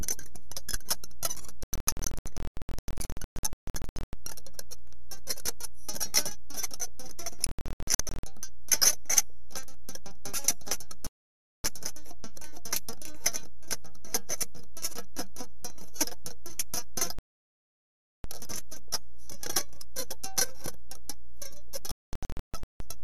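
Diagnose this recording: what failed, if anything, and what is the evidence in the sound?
Digital broadcast dropout, at the reception and decoding stage: the audio mutes in scattered short holes at 1.63–4.13 s, 7.47–8.23 s and 21.91–22.80 s, and in solid gaps at 11.07–11.65 s and 17.19–18.24 s. Frames were lost or failed their checksum and the receiver muted, which fits roughly 24 ms frames.

DC offset, at the analogue front end or converter: a constant shift of the waveform leaves steady energy at the very bottom of the spectrum throughout and eats headroom.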